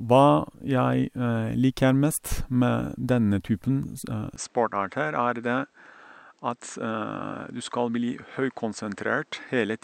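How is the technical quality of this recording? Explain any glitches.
The speech has one glitch, at 4.36 s. From there to the end, nothing sounds above 8.4 kHz, the level drops about 5 dB, and faint new background noise appears, with no gap. This is likely an input switched to a poorer device with a narrower band.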